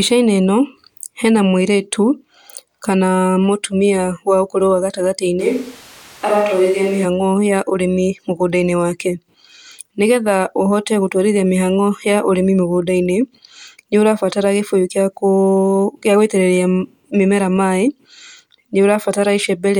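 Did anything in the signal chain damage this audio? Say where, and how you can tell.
Yes. From 5.41 s to 7.04 s the speech turns roomy and hollow, and the bass thins out. The change is abrupt at both ends. Overall level stays about the same, but background noise rises to roughly 25 dB below the speech. This is a capture-stage problem, most likely a switch to a distant microphone. The close microphone's feed dropped out and a farther pickup filled in. That pickup hears more room reflection and less of the source's low end.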